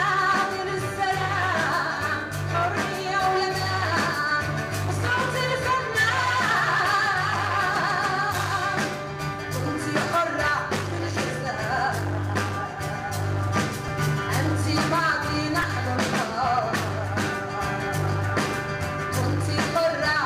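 Two quick repeated-buffer glitches in the audio, at 13.88 s and 15.62 s: a 2.9 ms chunk, which fits a 128-sample buffer, replays two then four extra times, giving brief buzzy clicks.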